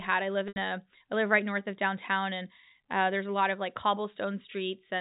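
At 0.48 s, just after "I live", a run of packets went missing, about 80 ms of audio, which fits four 20 ms packets. This is packet loss with pitch repetition: the receiver filled the gap by replaying the last pitch period and fading it down. Until 0.56 s the sound holds on a slightly buzzy, frozen tone that thins away, then picks up again at "a I live right", all over the band-limited G.711 telephone sound.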